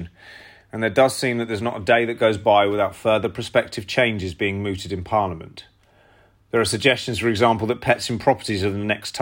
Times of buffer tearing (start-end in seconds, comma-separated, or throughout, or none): none